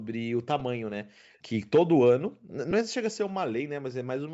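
At 0.60 s there is a brief lost LE Audio frames event, a 10 ms gap that fits a single dropped LC3 frame. The decoder fills the hole by repeating the previous spectrum with randomised phase signs, so the sound there turns into a short, noisy smear rather than a clean click or silence. At this length the concealment never reaches its fade stage.

Between 1.33 and 1.39 s a very faint delayed copy of the speech appears, roughly 40 dB below the main level and trailing it by 296 ms. This is likely an echo leak: the far side's loudspeaker output reached its microphone, and the echo canceller let a residue through. It is a short scrap rather than a sustained tail.

From 2.71 to 2.73 s a second lost LE Audio frames event spans 20 ms, consistent with two consecutive 10 ms frames. The concealed stretch is twice as long as the first, so the grainy, smeared texture lasts longer before normal decoding resumes. 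The audio across the clip is band-limited to 8 kHz, as expected for call processing.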